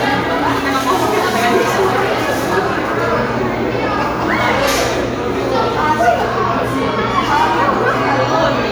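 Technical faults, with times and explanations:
No technical faults detected anywhere in the audio.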